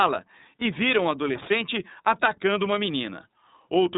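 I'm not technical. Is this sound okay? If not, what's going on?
No. Throughout the speech it sounds thin, muffled and a little rough or robotic, like a phone call. That's the iLBC codec, a phone-line compression method that discards everything above about 3.8 kHz and rebuilds each 30 ms slice of sound separately.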